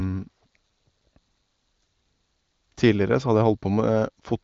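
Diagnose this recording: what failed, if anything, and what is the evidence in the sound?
Nothing failed: the speech comes through an AMR wideband (HD Voice) link at one of its higher rates, and the sound gives no evidence of any fault.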